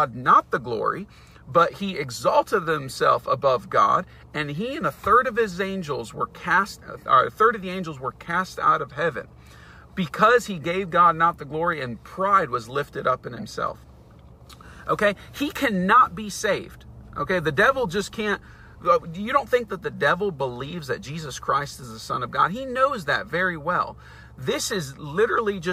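Right around 13.37 to 13.43 s there's a corrupt frame decoded, a quick glitch lasting about 70 ms. What's going on is that a couple of compressed frames got bit damage, and the decoder played them anyway instead of concealing them, so misread gains and codes threw energy into the wrong frequency bands. You hear it as a short burst, peaking at roughly -25 dBFS, that doesn't belong to the surrounding sound.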